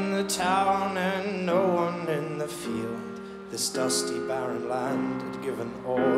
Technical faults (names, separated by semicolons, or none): none